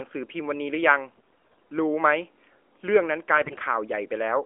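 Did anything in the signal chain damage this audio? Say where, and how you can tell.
Yes: hoarse, gargly speech from 1.16 to 1.60 s and 3.34 to 3.56 s points to AMR bit errors on the network link, which scramble the codec's pulse and gain values.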